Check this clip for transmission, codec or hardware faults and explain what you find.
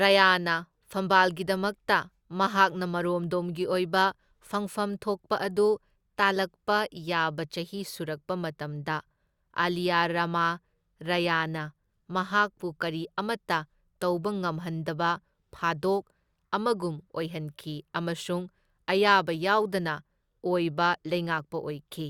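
No faults detected here.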